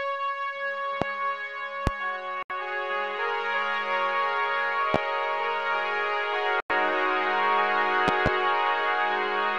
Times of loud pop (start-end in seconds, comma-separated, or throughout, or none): 1.02-1.05, 1.87-1.90, 4.94-4.98, 8.08-8.29